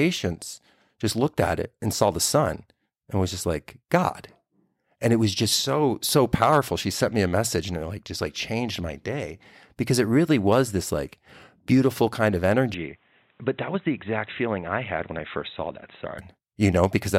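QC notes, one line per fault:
12.74–16.18 s, input switched to a poorer device: the input likely changed to a narrower microphone, dropping everything above 3.9 kHz. Speech turns dull, about 5 dB quieter, with faint new background noise.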